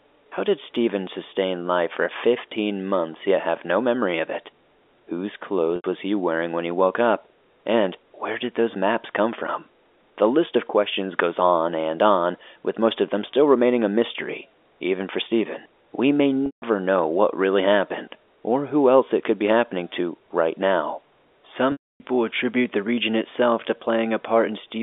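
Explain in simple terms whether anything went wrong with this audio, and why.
Packet loss with pitch repetition occurs three times: at 5.76 s for 80 ms, at 16.46 s for 160 ms, and at 21.72 s for 280 ms. Pieces of the transmitted speech never arrived. The receiver filled each gap by repeating the last bit of voice, which sounds like a brief buzzy hold that fades within about 50 ms. The longer gaps drop to silence before speech resumes.

Mains hum runs from 19.75 s to 24.29 s as a steady low 50 Hz tone under the speech. Electrical power leaked into the signal, most likely through a ground loop or a nearby transformer. It overlaps the longest dropout.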